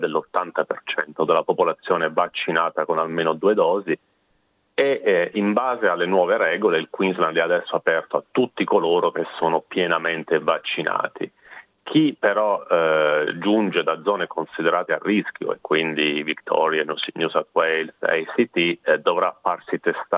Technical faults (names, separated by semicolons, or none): none